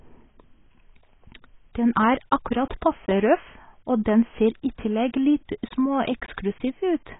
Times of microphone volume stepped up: none

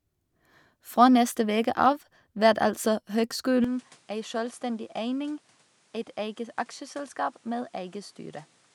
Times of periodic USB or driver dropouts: none

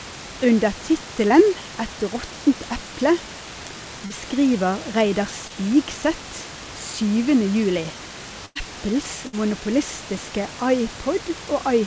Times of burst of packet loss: 8.46-8.57, 9.27-9.35

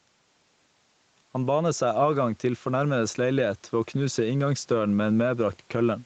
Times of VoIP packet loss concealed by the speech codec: none

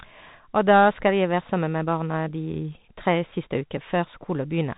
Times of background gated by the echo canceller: none

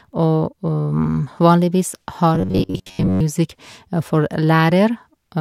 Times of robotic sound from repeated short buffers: 2.35-3.20

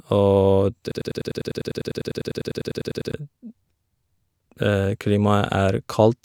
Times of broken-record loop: 0.92-3.14

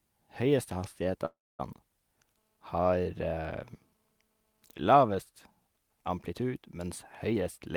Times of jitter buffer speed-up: 7.31-7.61

